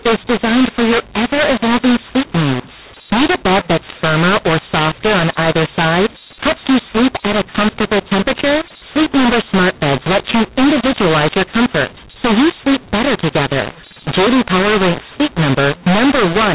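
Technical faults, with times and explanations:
Throughout, mu-law and A-law mixed up: A-law G.711 samples decoded as mu-law scramble every level, distorting the speech and lifting the pauses into noise.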